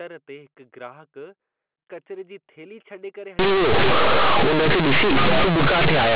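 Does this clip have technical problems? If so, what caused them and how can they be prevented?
Yes. From 3.39 s to the end, companded audio read as linear: mu-law bytes play as plain 8-bit samples without expansion, so quiet passages swell into loud, buzzy distortion over the band-limited telephone sound. To prevent it, declare the stream as mu-law so the player expands it before playback.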